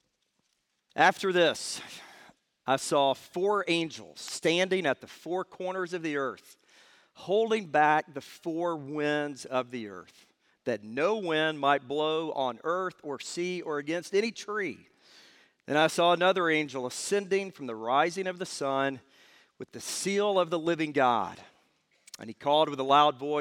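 At 4.24 to 4.29 s, damaged data in a compressed stream corrupts a short run of frames, so the decoder misreads them, loses sync and hunts for the next valid frame header. The result is a brief chirp or blip lasting about 50 ms.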